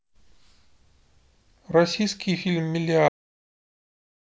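At about 3.08 s the speech just stops dead, a classic cut-off end. Whatever sound was in progress gets chopped mid-stream and the audio falls straight to digital silence, with no natural decay or room tail, and it stays silent for the last 1.25 s or so. What's happened is that the final stretch of buffers never got written out or played, so the recording simply ends where the data ran out.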